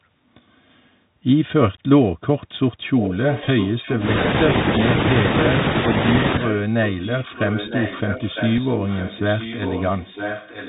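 Throughout, the speech sounds band-limited and scratchy, with granular hiss and gritty sibilants. This is the Bluetooth CVSD headset codec at 64 kbps: one-bit delta coding cuts everything above 4 kHz, and its adaptive step lags loud, bright sounds.

From 2.99 to 4.02 s a faint copy of the speech returns 956 ms late, roughly 10 dB down. This is an echo leak, likely a loudspeaker-side echo canceller letting its microphone pickup through.

Between 3.43 and 3.49 s the sound turns briefly buzzy and ticking. A Bluetooth headset packet was repeated: about 22.5 ms of audio was lost across 45 ms, in runs of about 7 ms at most, and each gap was filled by replaying the previous packet.

From 6.44 s to the end, the same echo leak returns with the same 956 ms delay and a similar level.

At 8.58 s a single repeated packet covers a 3.8 ms gap and is heard as a small tick.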